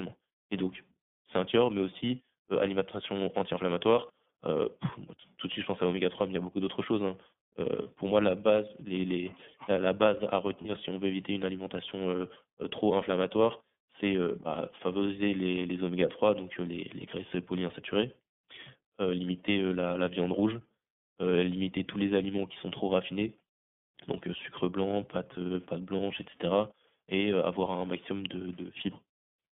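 A speech recording carried over the iLBC codec, whose band-limited, slightly rough and synthetic tone fits its 30 ms frame mode at 13.33 kbps; a spectrogram shows energy confined to roughly 150 Hz to 3.5 kHz. Lost iLBC frames cause two brief holds: at 7.82 to 7.87 s, just before "pour moi la base", and at 10.61 to 10.65 s, between "la base à" and "si on veut éviter". Each gap sounds like a short, slightly buzzy or breathy sustained vowel, matching one 30 ms frame of repeated pitch cycle mixed with noise. On a waveform these show as a short stretch of repeating periods, and on a spectrogram as flat, smeared harmonics, before the normal voice resumes almost at once.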